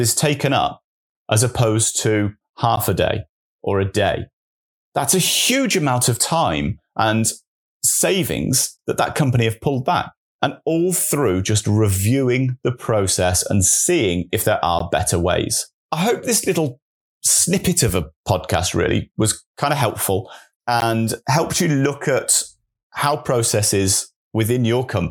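Gaps at joins of encoded pieces fall at 2.76, 8.77, 14.79 and 20.80 s, every 6.0 s. Separately encoded segments were joined with their encoder delay and padding intact, opening 13 to 16 ms breaks in the speech.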